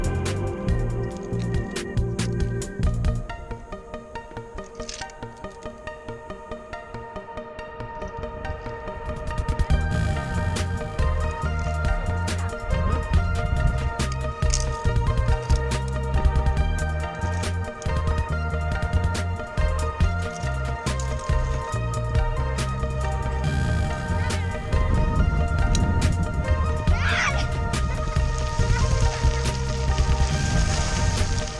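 No dropouts, glitches, clipping or timing errors turn up anywhere in the recording.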